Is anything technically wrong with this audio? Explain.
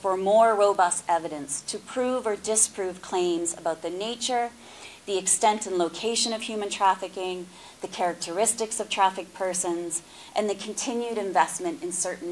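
Yes. Throughout, the resampler restarted on every block: each 50 ms block went from 48 kHz to 24 kHz without its neighbours, leaving edge errors heard as a 20 Hz ticking buzz under the sound.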